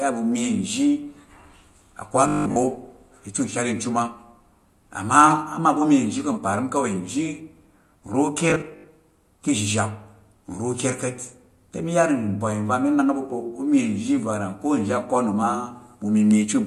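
At 2.28–2.58 s and 8.50–8.88 s the speech becomes a rigid, metallic 50 Hz buzz: robotic sound from repeated short buffers, likely 20 ms long.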